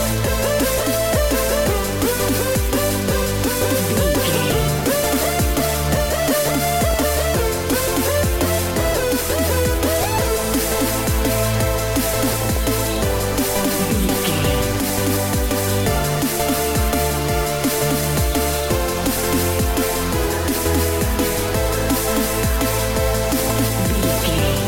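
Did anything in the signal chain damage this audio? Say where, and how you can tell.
Yes, DAB burbling at 4.78–5.37, 6.91–6.97, 12.16–12.57, 14.89–15.24, 18.98–19.28 and 23.26–23.61 s. This is codec-stage damage. Residual bit errors corrupt MP2 scale factors, so single sub-bands jump in level, showing on a spectrogram as flickering rectangular blocks.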